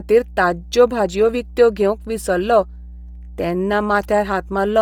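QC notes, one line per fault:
throughout, mains hum: A ground loop or nearby transformer is coupling the 60 Hz power line into the signal path, laying a steady low drone with a few low harmonics under the speech, sitting roughly 20 dB below it.
throughout, Bluetooth LC3 compression: The speech has a breathy, grainy edge, with upper frequencies replaced by noise-like fill, even though the band extends to about 20.2 kHz. This is likely heavy LC3 coding, fitting a low bitrate around 32 kbps with 10 ms frames.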